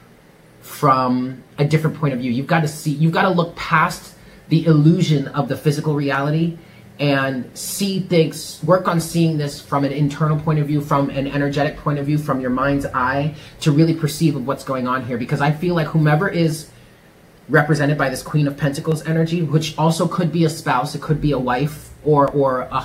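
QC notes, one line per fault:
6.15, 7.69, 9.00, 16.52, 17.78, 18.92 and 22.28 s: single sharp clicks, likely dropped samples, where a fraction of a millisecond goes missing and the waveform jumps abruptly.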